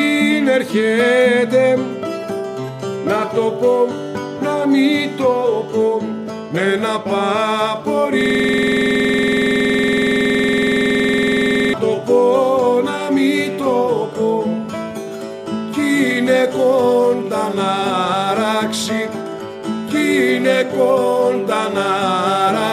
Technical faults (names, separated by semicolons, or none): system hang loop